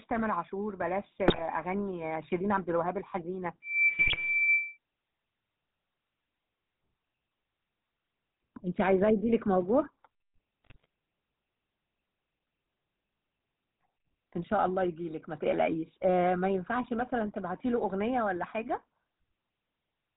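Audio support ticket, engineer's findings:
GSM full-rate codec, whole clip: buzzy, gravelly speech with nothing above 4 kHz, consistent with 13 kbps GSM full rate. The excitation is coded as regularly spaced pulses from a decimated residual, so the roughness is steady rather than fluttery. That sets it apart from a low-bitrate MP3.

GSM bit errors at 1.28–1.45 s, 3.89–4.17 s and 10.64–10.86 s: short squawks, pops and gargling. Corrupted filter, pitch and gain parameters in the decoder distort the spectrum or spike the level frame by frame. This is erratic, not a smooth lowpass or a dropout.

Loudspeaker feedback squeal at 3.62–4.77 s: a single 2.3 kHz tone swells over roughly a third of a second to well above the speech. The mic-to-speaker loop gain exceeds one at that frequency. The steady pitch distinguishes it from the codec squawks inside it.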